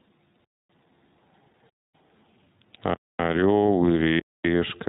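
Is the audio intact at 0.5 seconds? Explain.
No. A gap between chunks runs from 0.45 to 0.70 s: the audio arrived in pieces about 1 s long, and 250 ms of silence was left before the next piece began. No sound is lost, but speech is interrupted there and then resumes.

Across that moment the speech also passes through the iLBC codec, which fits its 20 ms frames at roughly 15 kbps. It codes each frame independently and drops everything above 4 kHz, so speech sounds narrowband, slightly rough and synthetic, and the damage is plainly audible.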